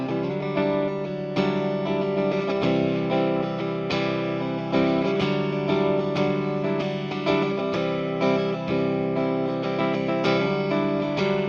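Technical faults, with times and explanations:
No technical faults detected.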